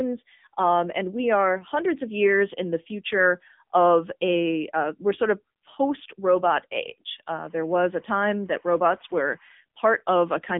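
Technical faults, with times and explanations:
Throughout, AMR narrowband mobile codec: nothing above about 3.7 kHz survives, and at a bitrate suggesting 7.4 kbps the speech turns clearly buzzy and synthetic.
7.38 to 9.53 s, timecode bleed: a faint chirping warble hopping between roughly 1 and 2 kHz, sitting around 35 dB down, from 25 fps timecode leaking in.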